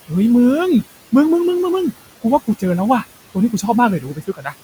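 Throughout the speech, a noise suppressor pulls down the bands it judges to be steady noise by about 17 dB, frame by frame. The room noise, sitting about 17 dB below the speech, drops away between phrases and returns beneath them.

From 4.0 to 4.54 s, the same suppressor mistakes parts of the speech for noise and cuts them with the background, by as much as about 14 dB. Roughly a third of a second of speech loses its softer sounds, which come across swallowed and faint.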